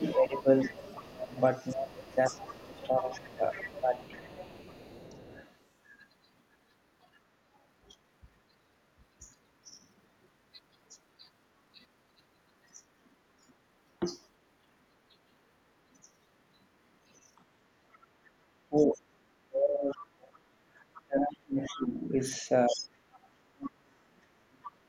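A 25-second speech recording with echo-canceller trouble in three stretches. Speech suppressed in double talk: the talker dips in pieces from 0.0 to 5.23 s (deepest about 20 dB, roughly two seconds affected in total), briefly at 10.9 s, and from 18.69 s to the end (up to about 40 dB, roughly four seconds). This is likely the canceller attenuating both talkers while the far end was active. The other side's voice leaking through is audible from 0.36 to 5.5 s at roughly 20 dB below the speech and from 17.36 to 24.71 s at roughly 15 dB below, probably uncancelled loudspeaker pickup reaching the microphone. Background gated by the echo canceller shows as room-tone dropouts at 17.99–18.15 s (about 13 dB) and 20.46–20.67 s (about 8 dB), where the canceller clamped the microphone during loudspeaker playback.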